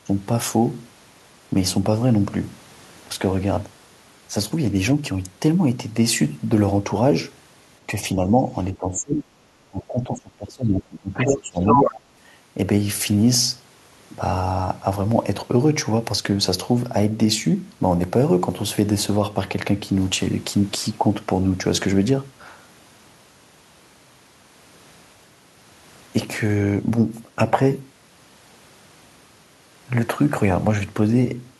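A speech recording in which the talker's level dips at 8.15–8.52 s, 8.72–9.32 s, 9.67–11.61 s and 11.85–11.96 s, from a slight dip up to around 25 dB at the deepest. This is likely speech suppressed in double talk, with the echo canceller ducking both voices. A waveform would show the envelope pinched, and a spectrogram would show faded or gapped bands. In a second fault, the other side's voice leaking through appears at 11.19–11.37 s and 11.66–12.0 s, roughly as loud as the talker. It is likely far-end loudspeaker echo that the canceller missed, and it shows as short, separate energy bursts that don't follow the talker's own harmonic pattern.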